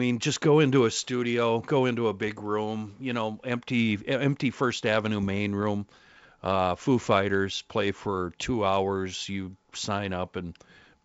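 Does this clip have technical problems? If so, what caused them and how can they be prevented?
Yes: bit errors on an ADPCM link cause pops and rough bursts at 5.23–5.39 s and 7.01–7.07 s. Flipped bits derail the decoder's step size and predictor, so each error rings on briefly. Waveforms show sudden spikes and level jumps; spectrograms show broadband vertical smears. Adding error protection or concealment to the link, or using a cleaner channel, prevents this.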